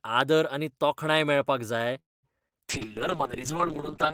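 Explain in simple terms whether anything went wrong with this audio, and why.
Right after "आनी तोखणाय मेळपाक जाय", at 1.99 s, there is a call audio freeze lasting about a quarter of a second, to 2.25 s. It is mostly silence. The likely cause is delayed network packets leaving the receiver's buffer empty. Nothing is lost; the sound simply resumes late.

Two short concealed packet losses follow, at 2.39 to 2.42 s and 2.48 to 2.53 s. In each, about 20 ms of audio never arrived, and the receiver patched the gap by extending the preceding sound. Each gap comes through as a brief smear or wobble.

From 2.71 s to the end comes a call bitrate drop. The connection forced the encoder onto far less data, so it coded more coarsely and discarded everything above about 8 kHz. The sound turns duller and rougher for the final 1.4 seconds.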